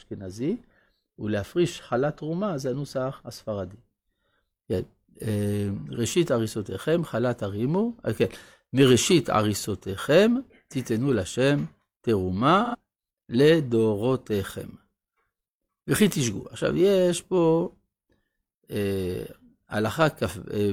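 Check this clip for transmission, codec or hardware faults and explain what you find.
One codec fault is present. AAC frame loss with concealment occurs from 12.64 to 12.75 s, a gap of about 85 ms, which fits two lost frames. The decoder rebuilds the missing stretch from the last good spectrum, so the speech briefly turns smeared and noisy instead of dropping to silence.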